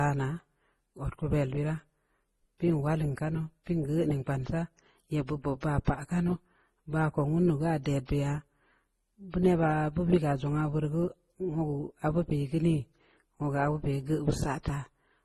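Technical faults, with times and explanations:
Throughout: transcoding between lossy codecs. The speech was likely coded twice, once as MP3 and then again as Opus, at rates that fit 32 and 24 kbit/s. Opus spends bits re-coding the MP3 artefacts, so both codecs' smearing is heard together, with nothing above 19.5 kHz.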